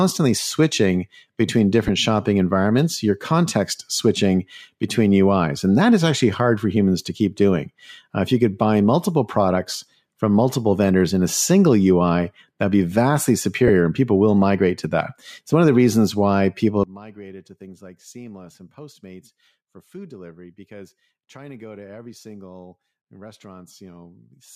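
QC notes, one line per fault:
1.88 s and 13.68 s, lost LE Audio frames: two brief dropouts, the first between "switching between" and "shopping environments your context", lasting 7.5 ms, the second between "that'd be vastly" and "and people will migrate", lasting 15 ms. These lengths fit one and then two lost 7.5 ms frames. The LC3 decoder filled each gap by repeating the last spectrum with randomised signs, so tonal content smears into a short noisy blur. Both gaps are too short to fade to silence.
16.84 s to end, one channel inverted: from just after "the reasons why people", the mono level drops by about 22 dB. What remains is a faint residue with the centred speech largely gone. This is likely one stereo channel having reversed polarity. When the two channels are summed, the material they share cancels, leaving only their small difference.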